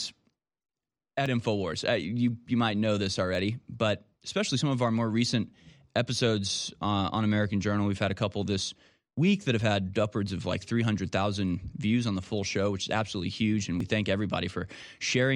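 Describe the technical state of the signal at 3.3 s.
Two devices on separate clocks likely drift about 500 ppm apart, causing clock drift buffer slips from 1.26 to 13.8 s, heard as clicks every 2.09 s.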